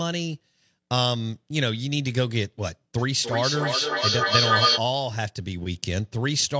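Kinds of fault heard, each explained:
Feedback echo between two devices: Sound loops back through a second device. Repeats come roughly every third of a second and pile up, peaking about 4 dB above the speech.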